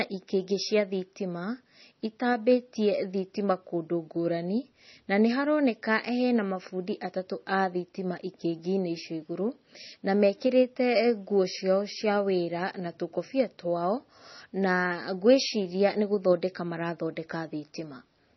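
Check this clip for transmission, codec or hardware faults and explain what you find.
One codec fault runs through the whole speech clip: MP3 compression damage, and it is heavy. Nothing is heard above about 5.9 kHz. That hard ceiling is where the encoder gave up on the treble to save bits. The likely cause is MP3 coding at a very low rate, which fits something near 24 kbps. Weak frequency detail flickers in and out between frames. So the speech sounds watery and swirly. The s sounds turn metallic and chirpy, and consonant onsets smear.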